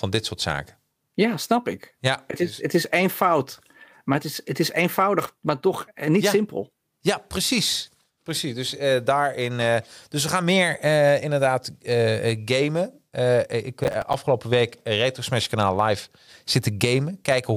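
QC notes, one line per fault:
13.84 to 14.14 s, processor overload crackle: the processor missed several buffer deadlines in a row, each around 10 ms, replaying old audio with hard edges. This produces gritty tearing over the speech.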